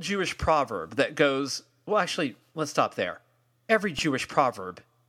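At 3.99 s, underrun with held sample: the buffer ran empty for 2.2 ms, freezing the waveform flat and losing roughly 2 ms of audio.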